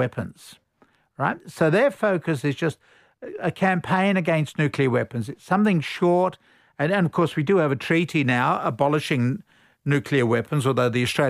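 From the start to 7.91 s, just before "now abolishing nuclear", the speech carries wrongly applied de-emphasis: a treble cut made where no pre-emphasis existed, or made twice, tilting the response smoothly downward to about 8 dB lower at 10 kHz than at 1 kHz, leaving it dull and muffled.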